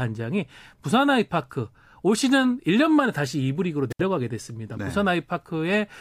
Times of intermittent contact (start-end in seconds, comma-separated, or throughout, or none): 3.90-4.01